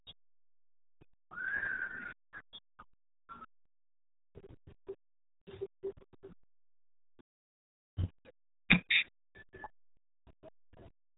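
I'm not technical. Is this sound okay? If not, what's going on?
No. The speech is squeezed through the RealAudio 14.4 codec from start to finish. This is an old format built for dial-up modems. It keeps the sound tiny by discarding most of the detail. Nothing above about 3.8 kHz gets through, so the voice sounds muffled, like it's coming down a narrow tube. The heavy compression also adds a gargly, watery wobble to the speech throughout.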